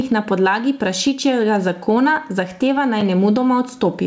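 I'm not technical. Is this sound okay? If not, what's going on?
No. Throughout the speech there is gain pumping: loud and soft parts are squeezed closer together in level and the sound is squashed, a large swing. That likely comes from the microphone level being set far too high while a fast automatic limiter keeps yanking it back down. It differs from noise suppression because the level itself rises and falls rather than the background being removed.

At 3.01 s there is a block of digital silence: the sound drops to total silence for about 5 ms and snaps back with no fade, so you hear a tiny tick. That fits a 256-sample chunk the program failed to fill in time. Unlike a crackle, it is one clean hole.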